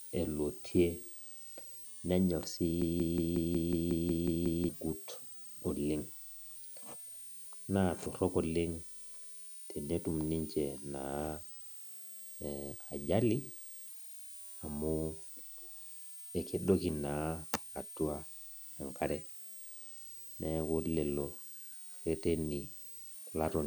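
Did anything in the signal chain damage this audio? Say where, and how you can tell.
Yes. A high whistle sits under the speech for the whole clip, wandering between about 8.3 and 9.3 kHz at roughly 15 dB below the signal. That is a switching supply whistle: a power supply on the analogue side cycling in an audible burst mode, its pitch moving with load.

From 2.82 s to 4.69 s, right after "nenyor si", a 0.18 s fragment repeats exactly ten times back to back, and whatever should have played there is gone. This broken-record loop is likely a stalled buffer or stream resending its last fragment.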